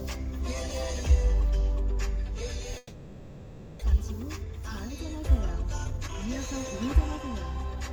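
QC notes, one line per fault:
2.77–3.83 s, long network dropout: the last sound smears into a fading buzz, then near-silence, and returns with about 0.6 s gone, likely lost packets, not a brief concealment glitch.
3.92–6.46 s, jitter buffer speed-up: the sound runs about 12% fast at unchanged pitch as the receiver trims short pitch-period pieces, roughly a third of a second in all, to shed the backlog.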